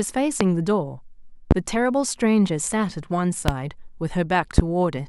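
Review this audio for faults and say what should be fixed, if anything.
A sudden voltage step or pulse, likely from a switch, a plug contact, static or a driver glitch, entered the signal path four times. Each shows up as a loud pop, a single sharp burst roughly 20 dB above the speech, at 0.41–0.44 s, 1.51–1.54 s, 3.48–3.52 s and 4.58–4.62 s. Each pop lasts about 35 ms while the speech continues underneath, so these four spots need repair. To prevent this, secure and shield cables and connectors, avoid switching or touching gear while recording, and check the interface driver.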